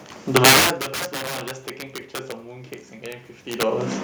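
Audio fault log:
Throughout: integer overflow. Loud peaks are driven about 13 dB past the ceiling, and instead of being limited they wrap around to the opposite sign. Roughly one sample in twenty jumps across the full range, so loud syllables crack violently, far harsher than ordinary clipping.
2.48 to 3.99 s: automatic gain rising. The input drops by about 17 dB. The gain control responds by raising its gain about 4 dB over roughly a second and a half, so voice and room noise swell up together.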